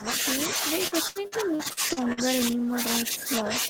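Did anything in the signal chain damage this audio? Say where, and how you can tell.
Yes. Three faults are audible in the speech, in call processing and network handling.

Across the whole clip the talker's level sinks and recovers, dipping by roughly 15 dB at its deepest. This is most likely speech suppressed in double talk: the echo canceller, faced with both ends talking at once, mistook the near talker for loudspeaker echo and attenuated everything. On a waveform the envelope shows sudden sags that don't follow the syllables.

From 0.87 to 2.20 s there is repeated packet loss, and it sounds robotic. Eight gaps fall in that stretch, the longest 77 ms. About 26% of the span is concealment rather than real signal. The receiver patched each hole by extending the last sound, which gives a choppy sound with pieces missing. On a spectrogram the harmonics go flat and frozen in short blocks. 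The waveform shows repeated, identical-looking cycles where fresh speech should be.

Between 2.51 and 2.72 s the jitter buffer slowed the audio down to build up its reserve. It played at about 86% speed and inserted 38 ms by repeating single pitch periods or bits of pauses, so the speech drags while the pitch stays the same. A spectrogram shows harmonics stretched horizontally at an unchanged frequency. The waveform shows near-duplicate stretches laid end to end.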